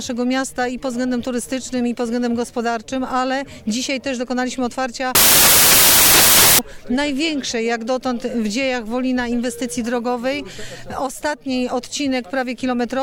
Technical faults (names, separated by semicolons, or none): samples built from the wrong bytes